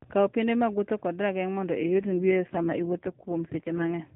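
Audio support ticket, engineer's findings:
AMR rate drop, 1.80–3.91 s: speech turns rougher, buzzier, more synthetic, then recovers. Component: AMR-NB codec, which fits a link-driven switch from 12.2 kbps to 4.75 kbps. No gap, 4 kHz band unchanged, unlike packet loss or bandwidth switching.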